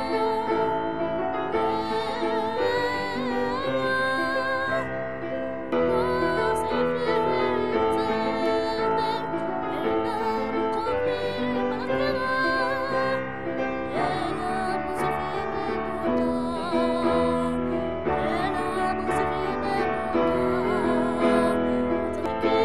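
No technical faults can be heard anywhere in this clip.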